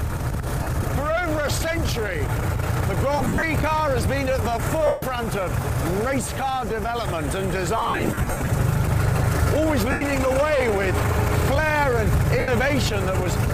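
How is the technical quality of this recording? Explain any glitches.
The recording is marred by repeated dropouts from lost LE Audio frames, on top of light lossy compression.

Lost LE Audio frames occur at 0.63–0.67 s, 3.18–3.43 s, 4.87–5.03 s, 7.77–8.50 s, 9.91–10.01 s and 12.39–12.48 s. When frames fail to arrive over the Bluetooth link, the LC3 decoder conceals the gap by repeating the last spectrum with scrambled signs and then fading it. Tonal content turns into a noisy smear. The two longer stretches are broken up rather than continuous, with runs up to about 50 ms and 70 ms. The gap lengths point to 7.5 ms frames.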